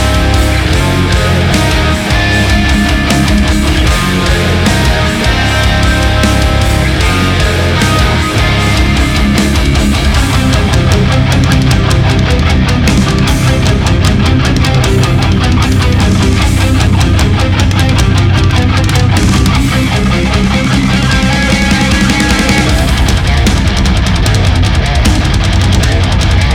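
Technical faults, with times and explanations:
Throughout, hard clipping: the signal is driven about 3 dB past what the chain can pass, so the loudest peaks get sheared off flat, with something like one sample in twenty pushed past the chain's limit. Those squared-off tops throw extra harmonics way up the spectrum, which is why the louder moments pick up a gritty crackle and a bit of harsh edge, rather than a constant fuzz, since the overload is modest.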